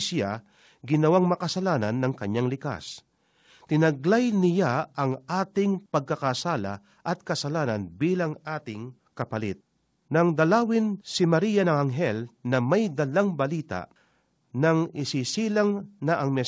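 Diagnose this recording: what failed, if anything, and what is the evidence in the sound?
Nothing has gone wrong here: the speech has simply come through a call path, and the way everything stops at 8 kHz fits a wideband codec such as G.722 at 64 kbps doing its ordinary job.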